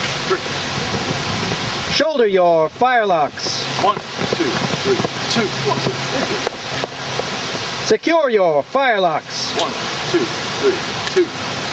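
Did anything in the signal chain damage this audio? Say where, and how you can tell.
Yes. The damage sits at the input gain stage, and it lasts the whole clip. This is gain pumping. The swing is around 15 dB. Loud and soft passages sit unnaturally close in level, so the sound feels squashed. The likely cause is input gain set far too high, with a fast limiter or compressor clamping down on each peak and releasing in the pauses.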